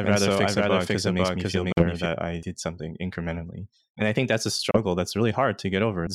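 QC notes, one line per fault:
0.00–2.06 s, doubled audio track: a second full-band copy at about the same level trails roughly half a second behind, already running at the start and stopping abruptly. Likely an out-of-step edit or a slower capture path.
1.72–1.85 s and 4.71–4.77 s, Bluetooth dropouts: silent holes, then the sound resumes further on, fitting about three and two lost packets, likely from late wireless delivery.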